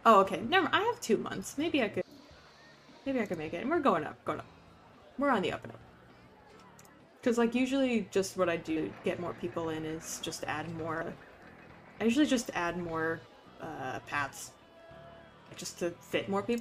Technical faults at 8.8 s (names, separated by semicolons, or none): audio missing between chunks